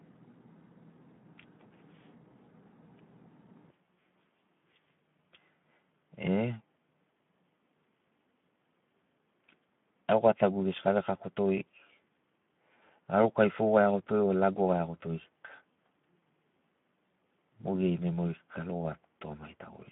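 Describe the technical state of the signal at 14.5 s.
At 14.5 s the speech sounds hoarse and noisy within a narrow 150 Hz to 3.5 kHz band, with nothing above 3.8 kHz, throughout the clip: Speex codec damage, fitting roughly 11 kbps CELP coding.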